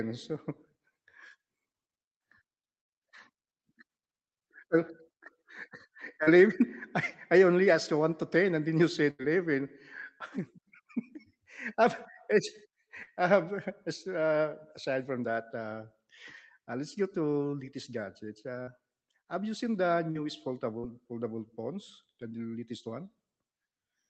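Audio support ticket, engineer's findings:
Short concealed packet loss at 6.23, 13.03 (just before "um it's"), 18.63 (just before "have you seen the"), 20.11 (just after "have you seen the") and 20.79 s. Roughly 40 ms dropped each time, patched by jitter-buffer concealment extrapolating the prior sound. Brief smears or wobbles, then a crossfade.

Burst of packet loss, 9.11–9.22 s. About 80 ms gone and replaced by a fading extrapolated continuation of the prior sound before playback skips ahead. Visible as a stretched continuation decaying into a low-energy gap. Spectrum above 8 kHz is empty throughout, consistent with Opus on the call path.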